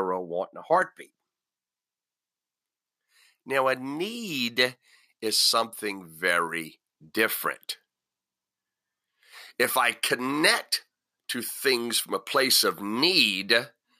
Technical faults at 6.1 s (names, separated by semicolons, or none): pre-emphasis left on